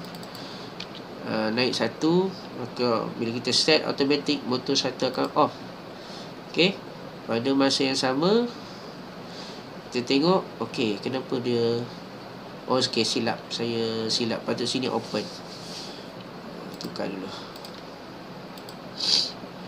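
Nothing stood out on listening to this recording.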